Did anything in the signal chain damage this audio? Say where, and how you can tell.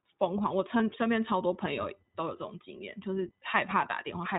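Yes. The codec stage has plainly audible damage throughout. The audio is cut off above 4 kHz and has a rough, slightly synthetic texture, the signature of iLBC. Its steadiness matches 20 ms frames at about 15.2 kbps. A plain low-pass filter would narrow the band without adding that coarseness.

A USB whine enters through the analogue wiring from 0.36 s to the end. It is a fixed 1 kHz tone whose 4 kHz harmonic is the strongest part. It sits faint, roughly 45 dB under the signal, as bus-frame current leaking through power or ground. Mains hum would sit at 50 or 60 Hz, not on a kilohertz grid.

Lost iLBC frames show up at the network stage between 0.78 and 0.81 s. About 20 ms, one frame, turns into a held, faintly buzzy vowel as the decoder repeats the last pitch cycle with noise. A plain dropout would leave silence or a click, and here the sound is correct again almost immediately because each frame decodes independently.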